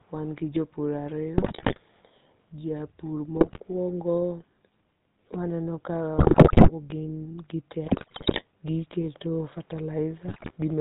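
From the first second to the end, the speech carries the buzzy, gravelly grain of the GSM full-rate codec, which fits its 13 kbps rate. The voice is rebuilt from a vocal-tract filter excited by sparse, evenly spaced pulses, so nothing survives above 4 kHz and the texture turns rough and reedy. Unlike a plain band-limit or low-bitrate muffling, the damage here is a constant rasp woven into the voice itself, plainly audible throughout.

On top of that come GSM bit errors at 1.38 to 1.79 s, right after "wan gi jopur", then at 3.36 to 3.60 s, 6.18 to 6.71 s (ending just before "gi gite"), 7.86 to 8.43 s (just after "gi gite"), and 10.28 to 10.53 s. Corrupted filter, pitch and gain values bend the spectrum and throw the level around frame by frame, producing squawks, pops and gargling. The worst is at 6.18 s, at about 12% errors. Unlike packet loss, these bursts garble the voice.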